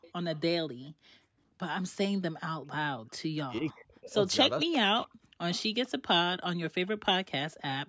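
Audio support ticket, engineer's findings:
Echo leak, 0.01 to 0.89 s: faint delayed copy of the speech trailing the main talker by 447 ms, roughly 25 dB down. Likely the far end's loudspeaker feeding its own mic, with the echo canceller not fully subtracting it, so the residue comes back to us.

Echo leak again, 4.61 to 7.56 s: same 447 ms lag, stronger this time, roughly 20 dB under the speech, and it runs for a longer stretch. Same path as before. The fixed delay points to one loudspeaker-to-mic route, not random reflections.

Background gated by the echo canceller, 0.91 to 1.58 s: room tone dips hard, about 40 dB at the deepest, for about 0.7 s, then comes back. Canceller's suppressor clamping the mic while the loudspeaker was active and releasing once it went quiet.

Speech suppressed in double talk, 3.34 to 5.34 s: talker's speech ducks by up to around 40 dB in pieces, adding up to about a second. 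Likely both ends talking at once, with the canceller unable to tell its own talker from the loudspeaker echo and pulling everything down. Overlaps the start of the second echo leak at 4.61 s. Band tops out at 8 kHz, which is just the normal call mic chain.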